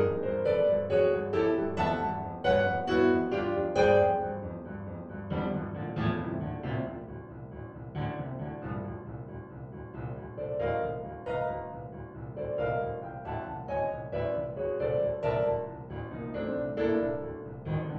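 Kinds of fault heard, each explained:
No technical faults are audible.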